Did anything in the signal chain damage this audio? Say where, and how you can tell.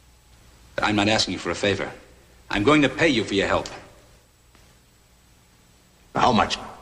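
No, nothing in the signal chain audibly damaged it.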